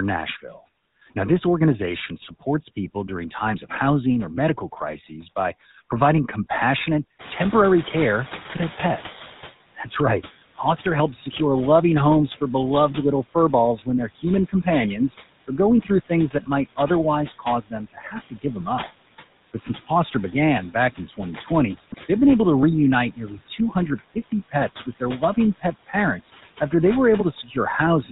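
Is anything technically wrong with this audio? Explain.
Yes, several faults run through this speech clip.

Noise suppressor artifacts are present from start to finish. The suppressor judges band by band, frame by frame, which parts of the spectrum are steady noise and pulls them down, here by about 13 dB. The background therefore dips in the gaps and swells back under the talker. The leftover noise has a fluttering, warbly texture, and the voice takes on a thin, watery quality.

The GSM full-rate codec also colours the whole clip. The codec rebuilds speech from a vocal-tract filter driven by a sparse, regularly spaced pulse train, and discards everything above 4 kHz. That coarse excitation is audible as a buzzy, gravelly roughness layered on the voice, with a dull, band-limited top end. The character fits the 13 kbps full-rate coder, and the damage is plainly audible.

GSM bit errors break through at 2.21–2.33 s, 4.92–5.08 s and 21.91–21.98 s. 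Corrupted bits reached the decoder and scrambled the filter, pitch or gain parameters for a few frames at a time, consistent with an error rate of around 1 percent. The result is brief squawks, pops and a gargling distortion that briefly wrecks the voice.

The noise suppressor catching up appears from 7.19 to 9.51 s. The room noise jumps by about 20 dB at around 7 s, while the suppressor's noise estimate still reflects the quieter background. The louder noise therefore passes with too little reduction at first, then gradually sinks over about 2.3 s as the estimate adapts, ending up about 11 dB lower. The room noise itself belongs to the recording, sitting about 16 dB under the speech after the rise.

Speech cut by the noise suppressor occurs at 9.76–11.35, 13.23–14.66, 15.48–16.78, 17.39–18.44, 20.74–21.49 and 23.16–26.73 s. In each stretch the suppressor mistook parts of the speech for noise and turned them down along with the background, by about 13 to 16 dB at the deepest. 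Each stretch loses from about 150 milliseconds in total up to about half a second in the last. Soft consonants and word endings sound swallowed or faded.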